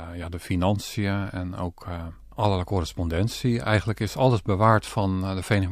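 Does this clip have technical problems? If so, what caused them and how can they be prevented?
Yes, mains hum comes in at 2.06 s and runs to 5.13 s, a steady 50 Hz tone sitting well below the speech, from a ground loop or nearby transformer. Fix the grounding or keep cables away from power supplies.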